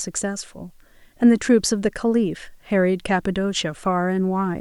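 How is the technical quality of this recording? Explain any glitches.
A steady, even hiss runs under the speech from start to finish, sitting roughly 45 dB below the speech level. It stays constant through pauses and loud passages alike, with no grit or distortion on the speech. The fault is low bit depth with dither. The sound points to about 10-bit resolution. Adding dither before each sample was rounded turned the rounding error into plain white noise rather than harsh, signal-dependent distortion.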